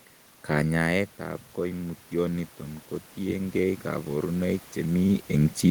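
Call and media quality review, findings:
Automatic gain rising, 0.48 to 2.54 s: voice and room noise swell together, about 4 dB over two seconds, settling just before "kotiengei koborunoik". AGC in the capture path is chasing an input drop of about 10 dB, raising gain slowly. Trigger is the talker moving back from the mic around 0.5 s, which is a real level change. Another talker move near 5.0 s. The room noise is in the original recording.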